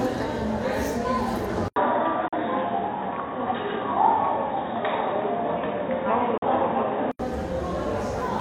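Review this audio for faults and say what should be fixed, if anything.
At 1.68 s the everyday sound drops out for about 80 ms, then returns dull and boxy, with nothing above 3.8 kHz, a level shift of a few decibels, and a new background hiss roughly 35 dB below the signal. Full bandwidth returns at 7.19 s. The likely cause is an input switched to a poorer device, such as a headset call profile, whose narrow passband and self-noise replace the original microphone's. Lock the input device for the whole recording and disable automatic switching.

Two digital broadcast dropouts interrupt the audio, from 2.28 to 2.36 s and from 6.38 to 6.45 s. Each is a hole of about 43 ms with roughly 3 ms fades at its edges, which fits a single lost frame. The receiver lost a frame and muted until good frames resumed, so the sound sent during each gap is gone and cannot be recovered. Improve reception or signal margin, and add stronger error protection so single corrupted frames are corrected rather than muted.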